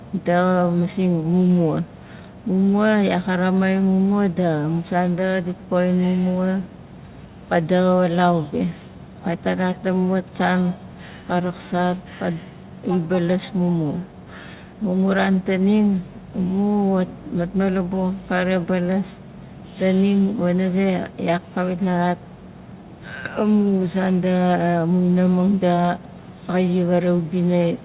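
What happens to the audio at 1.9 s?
Nothing goes wrong at 1.9 s: the speech carries on intact through that moment, heard through the narrow, telephone-band character of its mu-law coding at 8 kHz.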